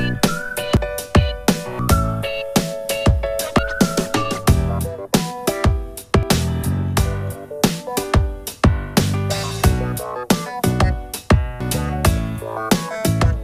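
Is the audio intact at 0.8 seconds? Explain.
No. At 0.77 s the sound jumps ahead with no silent gap, likely a dropped buffer (overrun) losing about a tenth of a second.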